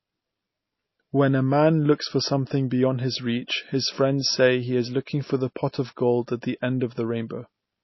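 Throughout the speech, nothing reaches above 5.8 kHz, so it sounds dull and boxed-in. A spectrogram shows a hard, flat ceiling at that line. This is low-bitrate audio saved at a high bitrate, likely a heavily compressed MP3 re-encoded at a far higher rate that cannot restore the missing band.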